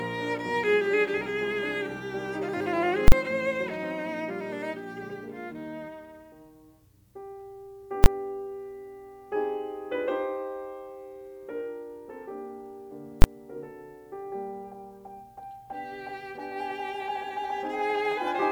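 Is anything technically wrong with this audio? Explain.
Yes. The music hits invalid numbers at full scale at 3.08–3.12 s (a 40 ms block), 8.04–8.06 s and 13.22–13.24 s (20 ms each): a calculation produced infinite or invalid values that were pinned to maximum output, so each short block sounds like a single loud bang.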